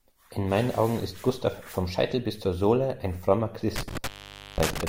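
At 3.76 s the speech hits an intermittent contact: a loose cable or plug briefly opens the line. The sound drops out for about half a second, with crackle on either side of the gap and just faint hiss underneath until the connection comes back.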